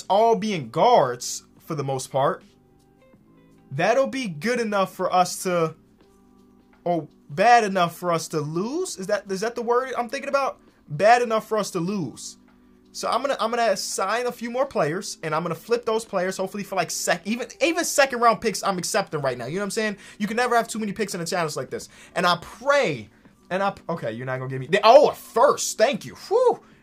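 No technical faults are audible.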